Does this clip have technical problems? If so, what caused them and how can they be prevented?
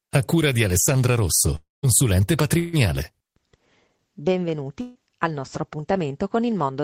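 Yes. A long network dropout likely struck at 1.55 to 1.85 s: the stream stopped arriving, so about 280 ms of speech never played. The receiver stretched the last sound into a fading buzz or hiss, then about 180 ms of near-silence, before speech resumed further on. A steadier connection with a larger jitter buffer or redundant transmission would prevent this.

Two bursts of packet loss, at 2.59 to 2.75 s and 4.81 to 4.97 s, each dropped about 140 ms of speech. Concealment held the last sound and let it fade as a buzz or hiss, with no silence, then jumped ahead past the missing section. Forward error correction and less network congestion would prevent these bursts.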